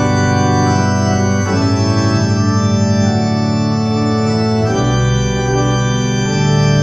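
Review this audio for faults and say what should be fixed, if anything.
No faults turn up in this audio, so nothing needs to be fixed.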